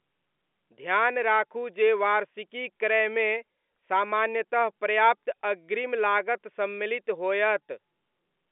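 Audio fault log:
No faults heard.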